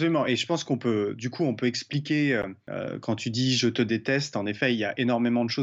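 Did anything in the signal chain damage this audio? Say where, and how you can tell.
Yes. At 2.42 s, between "coup on peut expliquer" and "euh quand tu dis", the speech drops to silence for 13.3 ms, then resumes further on. This is a Bluetooth dropout at the wireless playback stage, likely from a packet arriving too late and being discarded. The gap's length fits a single lost packet. On the waveform it appears as a flat gap, and on a spectrogram as a thin blank vertical stripe.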